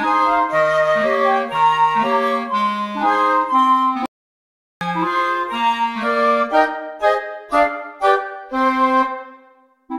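At 4.06 s the sound cuts out in mid-flow. Silence follows for about 0.75 s, until 4.81 s, and then the audio picks up again. This is a playback stall. The gap reads as a hole in the stream rather than a pause in the material. The likely cause is the player running short of data, or its output thread being held up, so nothing reached the output until it recovered.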